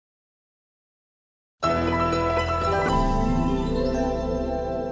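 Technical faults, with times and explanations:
2.89–4.92 s, wrong sample rate: From 2.89 s to the end, the audio is being clocked out more slowly than it was captured, with no resampling. That fits material recorded at 24 kHz and played at 16 kHz. Because speed and pitch are tied to the same clock, both drop by the same ratio. The sound runs at two-thirds speed and sits about 7 semitones lower, so it turns sluggish, dark and dragged out.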